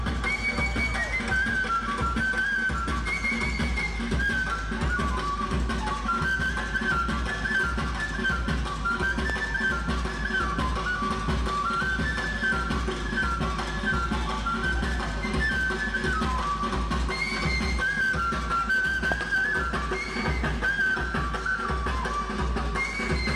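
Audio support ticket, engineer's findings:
Loud pop, 9.30–9.32 s, single; 19.12–19.23 s, double. Each stands roughly 15 dB above the signal, which continues underneath, unlike a dropout. Likely a voltage step from plug, switch, static or driver glitch, shaped by downstream circuitry.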